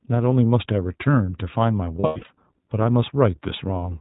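Throughout, the speech carries iLBC codec damage, plainly audible as a slightly rough, synthetic texture. The codec codes each frame's excitation independently, and the sound fits its 15.2 kbps, 20 ms frame mode. A spectrogram shows nothing above 4 kHz, a hard narrowband ceiling.

From 2.00 to 2.30 s, lost iLBC frames leave about 220 ms missing, scattered over 280 ms, with the longest run around a tenth of a second. The decoder repeats the last pitch cycle mixed with noise, heard as a held, buzzy vowel. The spectrogram shows frozen, smeared harmonics there, and the waveform shows repeated periods before normal detail snaps back.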